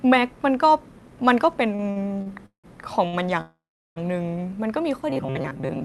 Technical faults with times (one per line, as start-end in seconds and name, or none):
1.75-2.66 repeated stalls (stutter)
3.08-3.15 short stall from a late packet
3.41-3.98 call audio freeze
5.10-5.85 robotic sound from repeated short buffers